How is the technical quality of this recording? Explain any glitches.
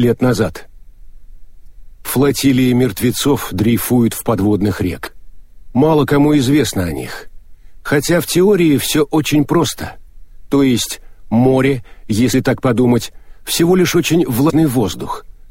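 The recording is marred by repeated short glitches. Damaged data in a compressed stream causes five brief breakups, at 1.64–1.67 s, 5.03–5.08 s, 10.05–10.09 s, 12.29–12.34 s and 14.46–14.51 s. At each point, part of the encoded data is corrupted. The decoder misreads those frames, loses sync and hunts for the next valid frame header. Each event lasts about 35 to 45 ms and is heard as a sudden chirp, squawk, click or short hole cutting through the sound.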